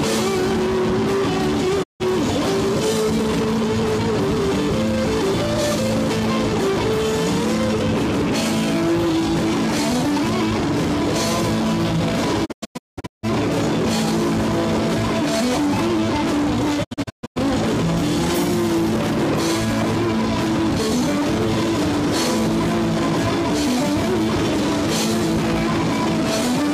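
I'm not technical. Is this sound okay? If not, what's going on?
No. The sound briefly fades to silence around 1.82–2.02 seconds, then breaks into several short gaps at 12.44–13.25 and 16.83–17.38 seconds. This is a digital broadcast dropout: the receiver lost the signal, muted, and anything sent during those gaps is gone.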